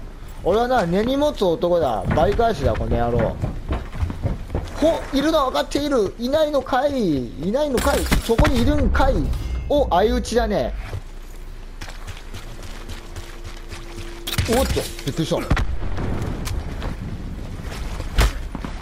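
The audio has overlapping chunks. A stutter occurs at 4.95–4.97 s, 10.97–10.99 s and 16.99–17.01 s, every 6.0 s. Each chunk begins before the previous one ends. About 21.3 ms of sound replays at every join.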